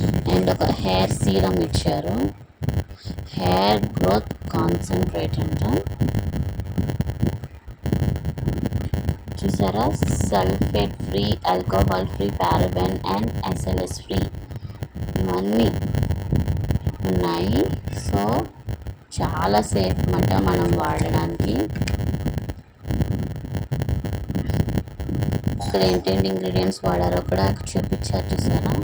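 Throughout, a block size mismatch (padded) leaves every block's tail zero-filled, producing a 100 Hz buzz and audio slowed to 0.919 times speed, at about normal pitch.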